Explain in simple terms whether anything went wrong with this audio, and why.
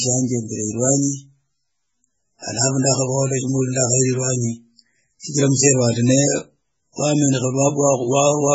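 Throughout the speech, the sound is dull and watery, with a swirling, metallic edge on the s sounds and blurred starts to syllables. That points to MP3 compression, likely squeezed hard to save space. The encoder cut everything above about 7.7 kHz and dropped quiet detail that flickers in and out from moment to moment. A simple treble filter would only sound muffled. The warbling, chirpy texture is what marks MP3 compression.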